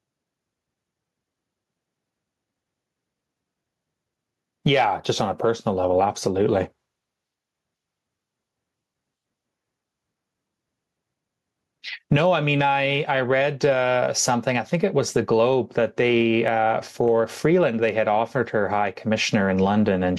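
It's a speech clip with gain pumping all the way through: the gain keeps ducking by around 10 dB whenever a loud sound hits, so everything feels squashed. Likely cause: input gain cranked too high, with a fast limiter clamping down.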